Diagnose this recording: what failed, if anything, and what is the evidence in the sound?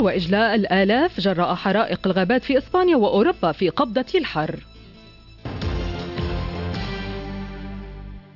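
Nothing failed here as far as I can hear; no stage in the chain left any audible trace, so there's no diagnosis to make.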